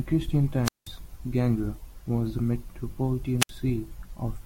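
Two wireless microphone squelch dropouts break up the speech. The first runs from 0.63 to 0.89 s, with the output muted for about 185 ms; the second, from 3.39 to 3.51 s, mutes for about 65 ms. In each, the radio link fades, hiss swells, and the receiver's squelch shuts the output until the signal recovers. That hiss before the hole sets it apart from a digital packet dropout, which cuts out abruptly without any noise build-up.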